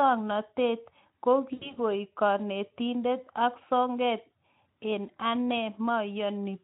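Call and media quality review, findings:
VoIP packet loss concealed by the speech codec, 1.53 to 1.79 s, ending just before "kanetindet ak sokeet". Symptom: sound stretched into a buzzy tone or coloured noise that fades, then weak and distorted for a moment after recovery. Component: decoder concealment. Mechanism: about 80 ms of audio missing, which fits four lost 20 ms frames. The decoder extrapolates its last pitch and filter at falling gain. Distinct from a plain dropout: no silent gap, and the damage outlasts the loss. Light Speex coloration at 15 kbps throughout.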